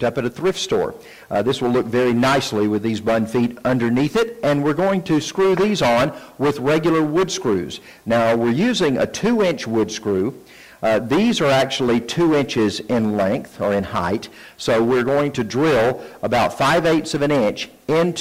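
Nothing technically wrong turns up anywhere in this audio, so there's nothing here to flag.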